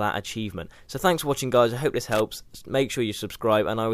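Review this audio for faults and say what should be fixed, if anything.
At 2.12 to 2.20 s there is a short burst of loose connector crackle lasting about 80 ms. A worn or dirty contact in the signal path is making and breaking rapidly, chopping the audio. On a waveform it appears as jagged, irregular spikes and dropouts; a spectrogram shows scattered vertical broadband streaks. Clean or replace the affected cable and connector, and strain-relieve it so it cannot shift during recording.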